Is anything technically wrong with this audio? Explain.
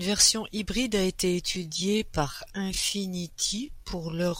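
Yes. From 1.4 s to the end, the speech has a time-stretched section. The pace suddenly slows to 0.63 times normal, but the pitch stays the same. Software likely lengthened the audio by repeating short pieces. It sounds dragging.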